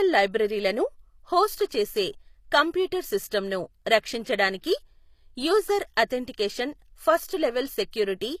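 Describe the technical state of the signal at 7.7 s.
At 7.7 s, as throughout, the speech has nothing above 14.9 kHz. This is likely low-bitrate audio saved at a high bitrate, with the earlier encoder's losses carried over.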